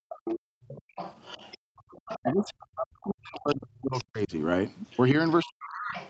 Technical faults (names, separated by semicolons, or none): background gated by the echo canceller; other side's voice leaking through; speech suppressed in double talk